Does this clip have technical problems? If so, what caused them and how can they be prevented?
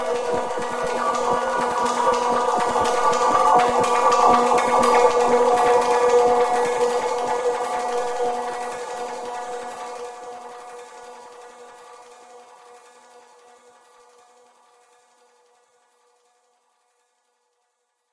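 No, nothing in this audio stood out as a technical problem on listening, so there is nothing here to trace to a cause or guard against.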